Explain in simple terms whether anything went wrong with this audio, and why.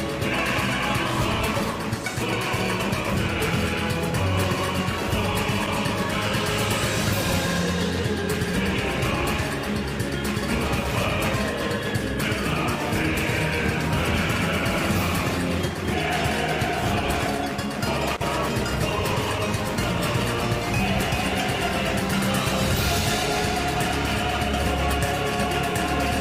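Nothing went wrong here: the audio runs without any audible technical fault anywhere in the clip.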